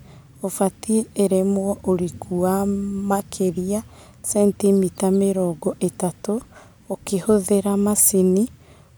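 A speech recording, and nothing is technically wrong with it.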